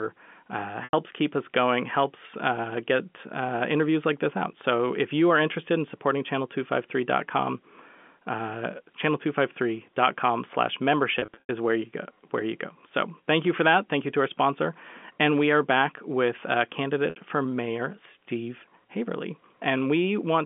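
Packet loss with pitch repetition occurs three times over the G.711 telephone line, whose 200 Hz to 3.4 kHz band is audible throughout. Lost packets, which fits 30 ms packets, are bridged by repeating the last pitch period, fading over about 50 ms, giving a held, buzzy tone before speech resumes through a short cross-fade. The losses are 90 ms at 0.84 s, 180 ms scattered across 11.19 to 11.49 s with a longest gap of 90 ms, and 60 ms at 17.1 s.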